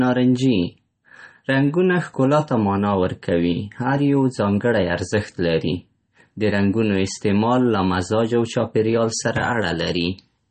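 A likely cause is MP3 compression at a starved bitrate, one that fits something around 32 kbps, applied across the whole speech clip. With so few bits, the encoder cuts the treble outright, leaving nothing above 8.4 kHz, and discards weaker frequency lines that then flicker in and out between frames. The damage is plainly audible: the voice sounds dull and watery, sibilants turn swirly and metallic, and consonant attacks lose their crispness.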